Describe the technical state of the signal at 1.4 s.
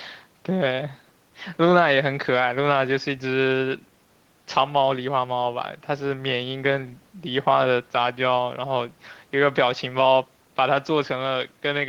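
At 1.4 s the speech signal is intact, with no fault audible at that moment.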